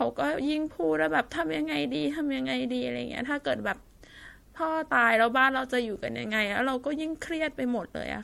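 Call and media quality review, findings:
Swirly, hollow, smeared speech throughout; consonant attacks blurred; no content above 16.5 kHz. Likely generation loss: repeated MP3 decode/re-encode, around five passes, each re-quantising on a shifted frame grid so noise and spectral holes accumulate. Consistent with a 64 kbit/s chain.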